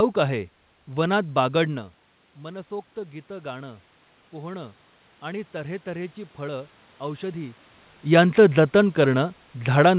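From 1.68 s to 7.59 s, automatic gain rising: after the level at the microphone drops by about 14 dB, the gain control slowly adds about 7 dB. Unlike a talker simply moving, the room noise swells along with the voice.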